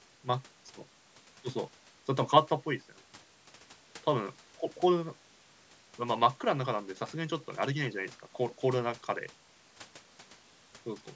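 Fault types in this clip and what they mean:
No technical faults are present: the speech carries the normal signature of call microphone processing, with the lowest bass rolled off by its high-pass filter and nothing above 8 kHz.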